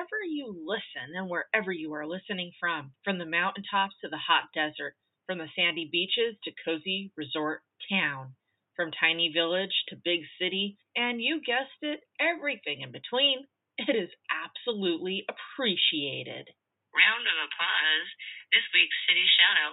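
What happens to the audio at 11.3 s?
Nothing goes wrong at 11.3 s; the audio plays through that moment intact, with no fault to be heard.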